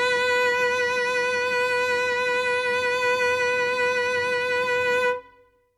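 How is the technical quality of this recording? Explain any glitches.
Nothing in this bit of music stands out as a glitch; there are no dropouts, clicks or other technical hiccups to point to anywhere in the recording.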